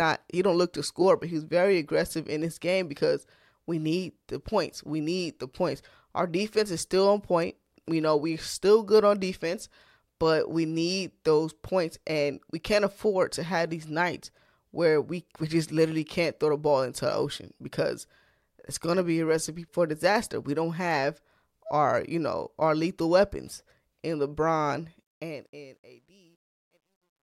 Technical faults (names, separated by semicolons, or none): truncation distortion on a fade